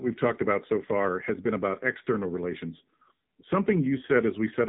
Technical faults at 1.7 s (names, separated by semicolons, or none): AMR narrowband mobile codec